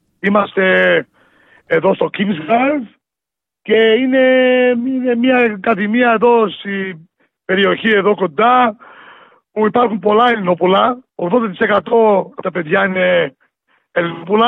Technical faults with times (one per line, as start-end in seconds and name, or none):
2.40-2.51 AAC frame loss with concealment
11.86-11.93 AAC frame loss with concealment
14.13-14.25 AAC frame loss with concealment